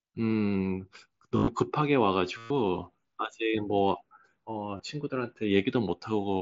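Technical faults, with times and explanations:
1.37–1.48 s, 2.37–2.51 s, 4.77–4.80 s: concealed Bluetooth headset packet loss. Lost mSBC packets were filled by repeating the best-matching recent ~20 ms of waveform, giving a buzzy held tone, longest at 2.37 s. The waveform shows identical repeating cycles at steady level, and the spectrogram shows flat, evenly spaced harmonic stripes.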